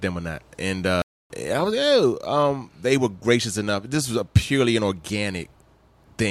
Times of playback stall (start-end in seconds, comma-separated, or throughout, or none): 1.02-1.30